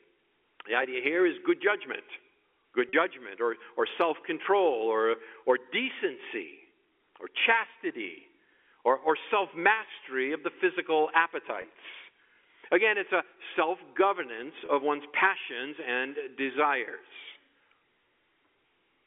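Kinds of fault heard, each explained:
Packet loss with pitch repetition: the receiver covers lost packets by looping the last pitch period, so the speech briefly holds with a buzzy edge. That happens three times here, after "is good judgment good" at 2.89 s, then at 11.62 and 14.66 s, each lasting 20 to 40 ms.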